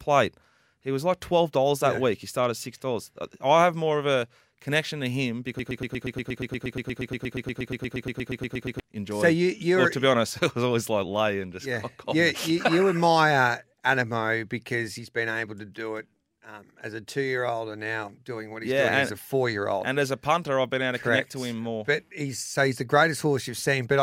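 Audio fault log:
5.59 to 8.80 s, broken-record loop: right after "a connection to him", a 118 ms fragment repeats exactly, back to back, 27 times, giving a rapid stutter. The stream likely stalled and kept resending its last buffered piece, so the speech due then is lost.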